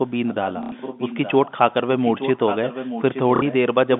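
Echo leak runs from 0.05 to 1.51 s: a faint delayed copy of the speech trails the talker by about 0.87 s, roughly 15 dB down. The likely cause is a loudspeaker at the far end whose echo canceller failed to remove everything its microphone picked up, so the residue was sent back. Inside that stretch, at 0.63 to 0.72 s, comes packet loss with the last packet repeated: 90 ms of audio is missing, and the receiver fills the gap by replaying the last packet it got. Because each repeat ignores the pitch period, the run buzzes as a brief robotic stutter. The spacing fits 30 ms packets, which makes the buzz about 33 Hz.

The echo returns from 1.96 to 3.54 s at the same 0.87 s delay but louder, only around 10 dB under the speech. Within it, at 3.36 to 3.42 s, a second loss of 60 ms produces another short repeated-packet stutter. A last scrap of echo surfaces from 3.96 s to the end, again quiet, roughly 15 dB down. 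The narrow telephone band from the G.711 coding can be heard throughout.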